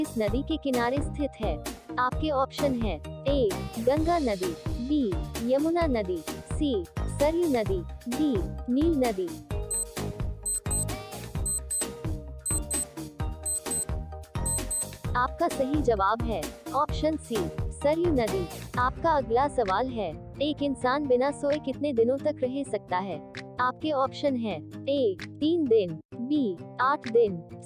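No technical faults can be heard anywhere in the audio.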